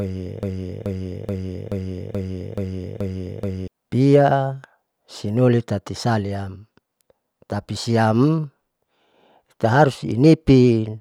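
Broken-record loop from 0 to 3.68 s: one 0.43 s speech fragment repeats exactly, likely from a stalled stream resending it, so the intended audio is lost.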